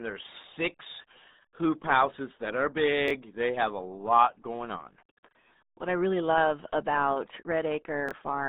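Throughout, the speech has passed through the RealAudio 14.4 codec, a dial-up era coder squeezing it into 8 kbit/s. The band is held to roughly 200 Hz to 3.7 kHz, with nothing above 3.8 kHz, so the voice sounds muffled, thin and gargly.

At 3.08 to 3.10 s, just after "hoop houses that are", chunks arrive out of order: a 10.67 ms chunk plays one slot late. At 8.09 to 8.12 s, another plays two slots late. Each spot gives a brief jumbled stutter at the hard joins.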